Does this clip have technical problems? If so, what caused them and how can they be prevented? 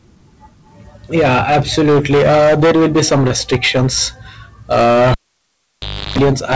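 Yes, three. Hard clipping runs through the whole speech clip: it's driven about 16 dB past full scale, so a big chunk of the peaks get squared off, and every loud syllable comes out as harsh fuzz. Drop the input gain until peaks sit several dB under full scale.

Short concealed packet loss hits around 3.28 to 3.32 s. About 20 ms never arrived, and the receiver patched it by stretching the preceding sound, giving a quick smear. A wired connection or a larger jitter buffer would make that less likely.

A cable pulled and plugged in shows up from 5.12 to 6.18 s: a pop, roughly a second of near silence, then about 0.34 s of 50 Hz mains buzz while only the tip touched, and a second pop as the sound comes back. Secure the cable, or mute before replugging.

The top end stops at 8 kHz, which is just the bandwidth of the call codec.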